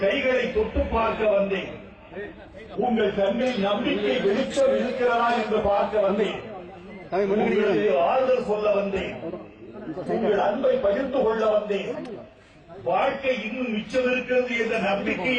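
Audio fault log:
3.41 s and 10.06 s, compressed frames skipped: whole 32 ms frames never play, about two at 3.41 s and one at 10.06 s, so the audio jumps ahead roughly 70 ms and 30 ms.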